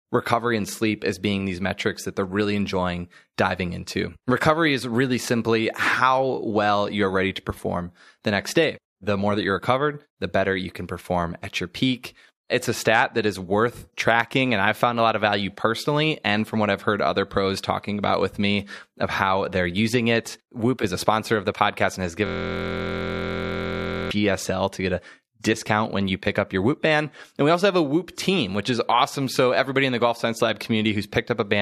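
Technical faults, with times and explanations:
22.26–24.11 s, system hang loop: right after "the podcast and has", the sound locks into a steady 43.1 Hz buzz as one 23.22 ms slice repeats exactly, which fits a 1024-sample buffer replayed while the computer or driver stalled.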